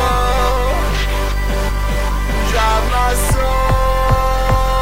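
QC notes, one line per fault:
No technical faults can be heard anywhere in the audio, and the signal stays steady and intact throughout.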